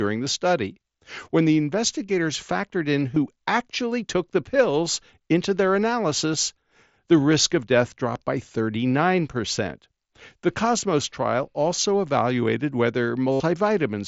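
At 3.15 s a blip too brief to notice passes almost unheard, while from 13.32 to 13.40 s an 82.5 ms buzzy held tone replaces the speech. Both are concealed Bluetooth headset packet loss, with the receiver looping recent waveform over lost packets.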